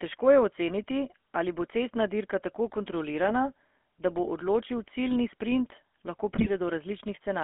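Throughout the clip the speech carries the buzzy, gravelly roughness of the GSM full-rate codec, which fits a 13 kbps stream. Excitation is rebuilt from coarsely spaced pulses, so the roughness is plainly audible. A spectrogram shows nothing below 250 Hz or above 3.4 kHz, with smeared harmonics.

From 6.34 to 6.50 s, GSM bit errors corrupt the decoder's filter, pitch and gain values. The speech bursts into squawks and gargling pops. The waveform shows jagged level spikes, and the spectrogram shows distorted, blotchy frames, which points to a handful of damaged frames.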